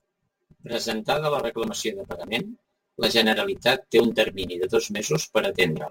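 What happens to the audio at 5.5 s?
At 5.5 s the speech sounds hollow and phasey, with a thin, boxy coloration. This is channel delay (comb filtering), present throughout the clip and not only at this moment. One channel arrives about 5 ms after the other, and when the two are summed to mono, shared content cancels at evenly spaced frequencies. The first notch sits around 100 Hz, and further notches repeat roughly every 200 Hz above it, carving a fixed comb into the spectrum.

A grainy hiss also rides on the speech there, strongest on louder syllables and sharp consonants and dropping away in pauses. This is sample clock jitter, also present for the whole clip. The converter's clock wanders by something like 7 µs, so each sample is taken a little early or late. Steep parts of the waveform turn that timing error into an amplitude error, which sits roughly 25 dB below the signal and rises and falls with it.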